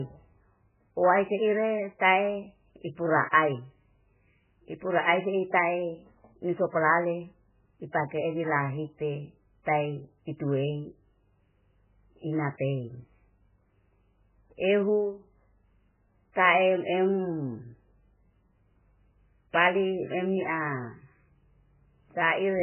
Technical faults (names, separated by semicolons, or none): low-bitrate audio saved at a high bitrate